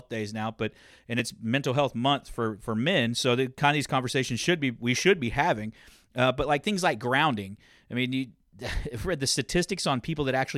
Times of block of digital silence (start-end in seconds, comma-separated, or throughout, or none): 1.19